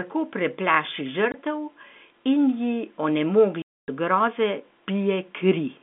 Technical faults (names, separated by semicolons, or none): packet loss filled with silence